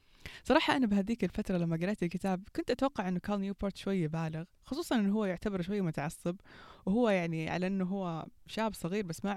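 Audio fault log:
The speech signal shows no audible technical fault at any point.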